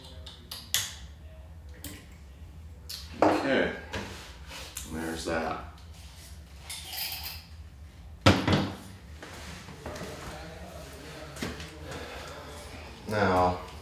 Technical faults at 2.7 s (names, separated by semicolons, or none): none